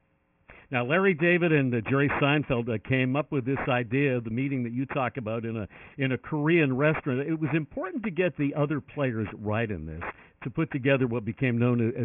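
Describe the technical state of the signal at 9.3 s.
Aliasing is present at 9.3 s, as it is for the entire clip. The signal was brought down to a 6 kHz rate without first removing content above 3 kHz, so everything that lay above that limit has folded back below it as false, unrelated frequencies. Those folded components sit only around 10 dB under the real material, giving a gritty, metallic edge, with the spectrum packed right up to 3 kHz.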